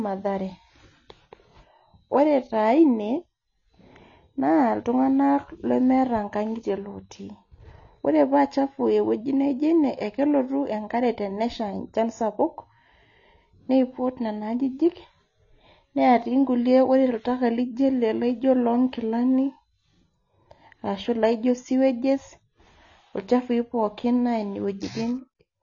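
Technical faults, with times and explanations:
Throughout, AAC compression: speech sounds dull and warbly with nothing above 6.9 kHz, likely from a low bitrate around 24 kbps removing and smearing high bands.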